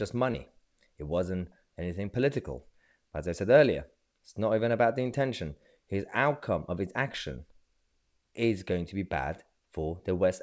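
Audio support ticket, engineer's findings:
Short concealed packet loss, 0.32–0.36 s. Brief smear. About 20 ms of audio never arrived; the receiver continued the previous sound, then blended back. Band stops at 8 kHz, fitting a wideband call codec.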